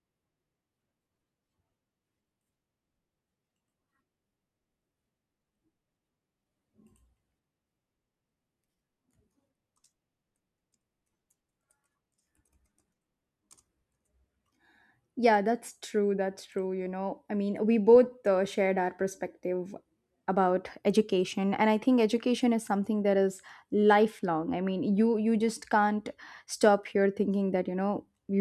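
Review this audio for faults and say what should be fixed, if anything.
Nothing needs fixing, as the speech signal shows no technical faults from beginning to end.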